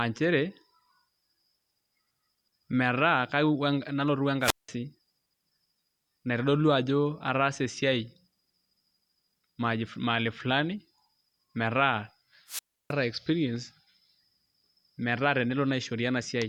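At 4.41 to 4.69 s and again at 12.47 to 12.93 s, the speech suffers a wireless microphone squelch dropout: the FM radio link fades, hiss rises briefly, then the receiver's squelch mutes the output for 0.18 s and 0.31 s respectively before the speech returns.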